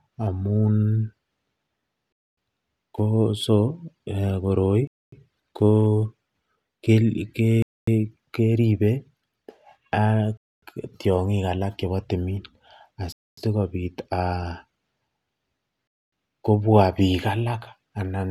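Hard-edged 250 ms holes cut the speech at 2.12, 4.87, 7.62, 10.37, 13.12 and 15.87 s. This is a gap between chunks: silence inserted after each 2.5 s block, with no sound lost.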